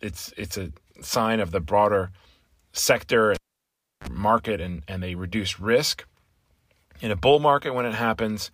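A sharp pop at 3.35 s cuts the speech off, leaving near silence for about 0.68 s. Then comes a brief 37 ms burst of 50 Hz mains buzz and a second pop as the sound returns at 4.07 s. This is a cable pulled and plugged in while live. Breaking the connection causes the first pop and the gap. On reinsertion, the plug's tip touches first and picks up hum before the full contact restores the signal.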